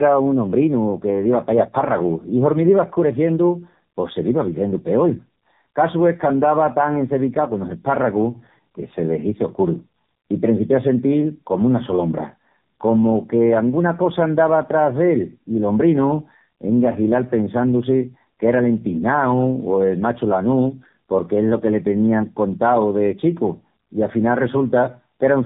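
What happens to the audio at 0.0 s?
From 0.0 s the speech carries tandem speech coding that lasts the whole clip. The sound points to two low-rate speech coders in a row, likely a G.729A stage and then AMR-NB, with G.711 between them. Each coder re-encodes the previous one's errors, so the voice sounds rough, muffled and warbly. On a spectrogram, energy stops flat at about 3.7 kHz, and the harmonics and formants look smeared and blotchy.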